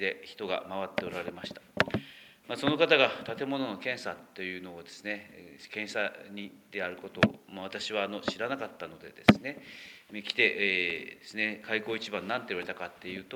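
No technical faults can be heard anywhere in this audio.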